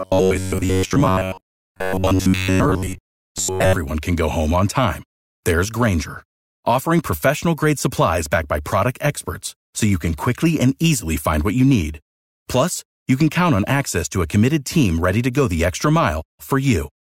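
From the very start, 0.01 s to 3.76 s, the speech turns into a rigid, metallic buzz pitched at about 94 Hz, still loosely tracing the syllables. This is robotic sound from repeated short buffers, likely caused by new audio arriving too seldom. The playback fills each gap by looping the last fragment, which fits a buffer of roughly 10.7 ms, for around seven tenths of that stretch while the real audio is skipped.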